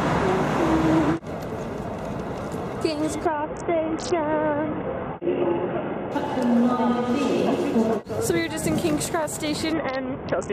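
From 3.25 to 6.12 s and again from 9.73 s to the end, a Bluetooth SBC bit pool drop dulls the treble and adds gritty noise, which fits the link cutting its bit pool to about 6. Unlike dropouts, the sound keeps flowing throughout.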